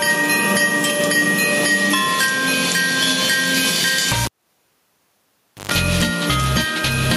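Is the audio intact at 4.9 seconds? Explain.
No. At 4.9 s the sound falls inside a cable pulled and plugged in, from 4.25 to 5.72 s. A pop cuts it, near silence follows, then a short 50 Hz mains buzz and a second pop. Throughout, gain pumping is also heard, likely from a fast limiter on excessive gain. The gain swings around 10 dB under loud sounds.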